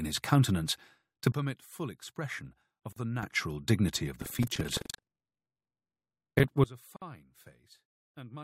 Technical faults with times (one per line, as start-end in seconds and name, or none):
1.32-3.23 sudden gain jump
2.92-2.96 gap at a join of encoded pieces
4.18-6.46 buffer tearing
6.64-8.43 sudden gain jump